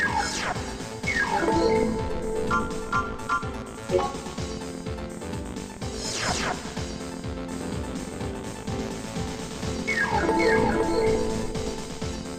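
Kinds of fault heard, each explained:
Doubled audio track: From 7.52 to 11.52 s, a second full-band copy of the sound runs about half a second behind, roughly 5 dB quieter. It starts and stops abruptly, with no decay or room colour. Likely a slower second capture path.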